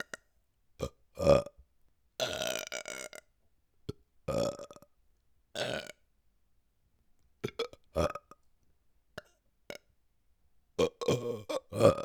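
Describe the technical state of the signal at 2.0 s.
Nothing is wrong with the signal at 2.0 s; the audio is intact at that moment.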